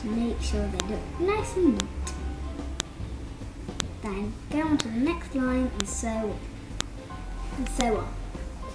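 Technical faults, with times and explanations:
0.80, 1.80, 2.80, 3.80, 4.80, 5.80, 6.81 and 7.81 s, file header played as audio: a sharp, loud snap lands once a second, right where each one-second piece of the stream begins. The pieces were joined with their WAV headers still attached, so those few dozen bytes of metadata get read as sample values. They're essentially random numbers, which makes a brief, loud spike that cuts through no matter what the sound underneath is doing.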